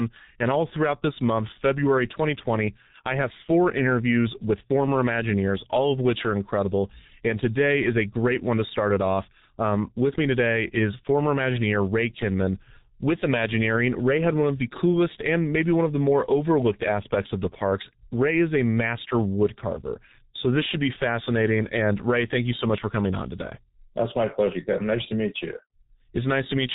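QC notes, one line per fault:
Throughout: G.723.1 codec. The speech is band-limited with nothing above 3.8 kHz, leaving it muffled, and the heavy coding damage makes it hoarse and smears consonants. That fits a very low-rate stream near 6 kbit/s. The coder works in 30 ms frames with a slowly updated voice model, so fast changes get averaged away. A spectrogram shows a hard ceiling at 3.8 kHz, blurred frame-rate striations and fuzzy fricative onsets.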